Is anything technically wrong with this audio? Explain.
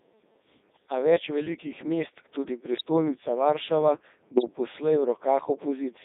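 Yes, two problems. The whole clip runs through the Codec 2 vocoder at 3.2 kbit/s, band-limited to 300 Hz to 3.7 kHz. Only pitch, voicing and envelope survive, so the speech is resynthesised and sounds buzzy and robotic. Then there are bit errors on digital voice radio, at 2.73 to 2.82 s right after "več velikih mest tudi" and again at 4.36 to 4.55 s. A few percent of corrupted bits scramble whole vocoder frames, so the voice briefly warbles and jumps in pitch and level.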